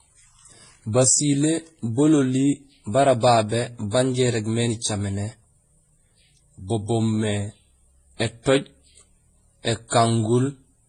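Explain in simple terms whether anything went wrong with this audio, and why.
Yes. The speech was likely passed through several lossy codecs in turn (transcoding between lossy codecs), so their artefacts pile up throughout and nothing above 11 kHz remains.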